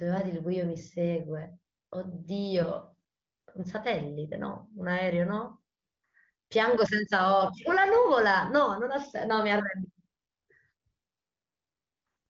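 Nothing is technically wrong with this speech recording, which comes through an AMR wideband (HD Voice) codec working as it should.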